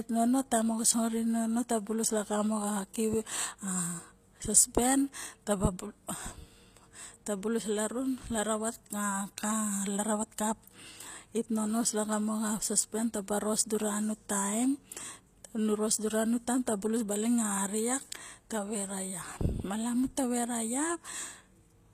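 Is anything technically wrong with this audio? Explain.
Yes. Throughout, the speech shows plainly audible HE-AAC compression damage, likely the cause. Nothing is present above 14.9 kHz, and the treble sounds rebuilt rather than captured: higher bands copied up from lower ones, so s sounds turn gritty and metallic, consistent with roughly 24 kbps.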